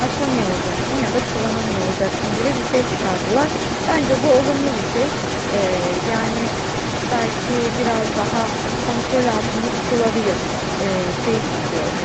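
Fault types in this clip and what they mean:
Echo leak: throughout the clip, from 0 to 12 s, a second copy of the speech trails about 206 ms behind, only slightly quieter than the original. This is likely a far-end echo canceller that failed to remove loudspeaker sound its microphone picked up, sending it back.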